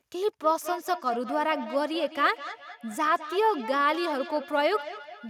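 From 0.43 s to the end, feedback echo between two devices: a second device replays the speech, the microphone recaptures it, and repeats return about every fifth of a second, peaking about 12 dB below the speech.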